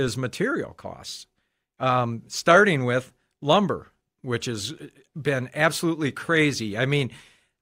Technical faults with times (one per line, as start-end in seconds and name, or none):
none